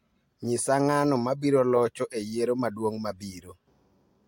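Nothing goes wrong anywhere in this bit of speech, so there's no technical fault to point to.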